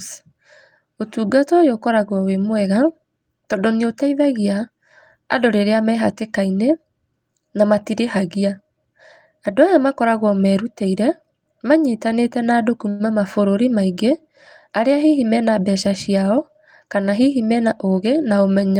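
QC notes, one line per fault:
12.89–13.02 s, call audio freeze: right after "merutĩire manyitanĩte na andũ" the speech stops and about 103 ms of continued tail fills the gap, a buzzy smear of the last sound fading out, before the talker resumes exactly where it left off. Nothing is lost; the pause is inserted and the delay grows by that amount. The likely cause is packets held up in transit so the jitter buffer ran dry. On a spectrogram the harmonics freeze into flat horizontal streaks that decay; the waveform shows a repeating, shrinking pattern.
15.28–16.87 s, jitter buffer speed-up: the speech leading into "kana hihi mena" runs about 6% fast at unchanged pitch, sounding slightly hurried. The receiver's buffer was over its target depth, so it trimmed short pitch-period-length slices again and again, around a tenth of a second in total, to bring the delay back down. On a spectrogram the formant tracks and syllables look compressed in time with harmonic spacing unchanged; the waveform shows periodic cycles with tiny splice joins.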